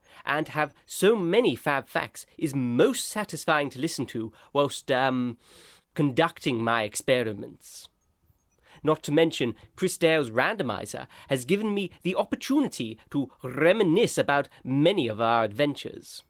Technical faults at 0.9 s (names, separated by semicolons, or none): none